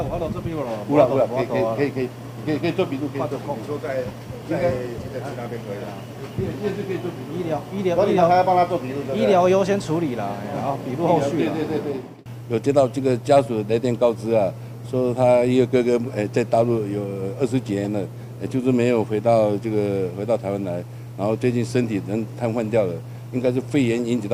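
A corrupt frame decoded at 17.84 to 17.86 s produces a brief chirp, squeak, blip or burst of noise in the audio. Flipped bits in one compressed frame were played back anyway, so misread gains or codes put energy at wrong frequencies, peaking around -20 dBFS for that single frame.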